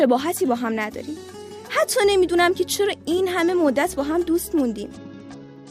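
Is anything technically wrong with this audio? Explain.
Yes, there is one fault, near the end of the clip.

From 4.94 s to the end at 5.70 s there is a Bluetooth SBC bit pool drop. When the link came under strain, the encoder cut its bit allocation. The sound points to the bit pool falling from 28 to about 9, roughly 78 kbps. The top sub-bands are starved and the rest are coarsely quantised, so the treble dulls and a gritty grain appears. On a spectrogram the upper bands empty out abruptly at 4.94 s, with speckled noise in the bands that remain. The waveform shows little change.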